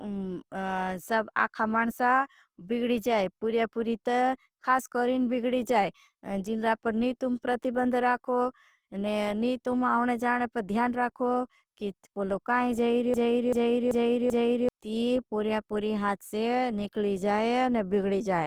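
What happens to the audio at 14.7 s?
The stream most likely stalled and kept resending the last fragment it held, causing a broken-record loop from 13.14 s to 14.69 s. Right after "कि पोलो काई जाए", a piece of about 387 ms repeats exactly, back to back, four times. The speech that should have filled that span is gone. At 14.69 s the loop releases and the speech picks up with "ती पूरी पूरी हाथ".

Across this moment, as through the whole clip, the speech also carries Opus compression in its music-style CELT mode, at a rate that fits about 24 kbps. Short of bits, the encoder fills bands with folded or noisy content instead of leaving holes, so the speech sounds plainly rough and grainy. It keeps full bandwidth, reaching up to 20.2 kHz.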